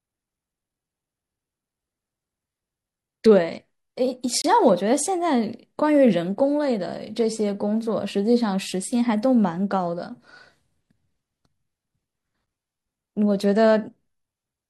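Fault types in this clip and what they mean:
Gap between stream segments: the speech is cut by short, hard-edged holes of silence, one of about 28 ms from 4.42 to 4.44 s and a briefer 8 ms dropout at 12.46 s. Each occurs where one chunk of the stream hands over to the next, which fits 2-second segments whose timestamps don't quite meet, so the player pads the space with silence rather than losing any of the sound.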